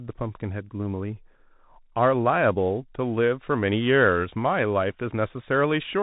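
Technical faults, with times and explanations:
Throughout, Bluetooth CVSD headset codec: the speech is band-limited, with nothing above about 3.8 kHz, which fits the 64 kbps CVSD headset link. CVSD encodes the signal one bit at a time as up or down steps of adapting size. Sibilants turn scratchy, loud high content outruns the step and distorts, and a granular hiss sits under the speech. On a spectrogram the energy stops flat at 3.8 kHz. The waveform shows a fine stair-stepped roughness.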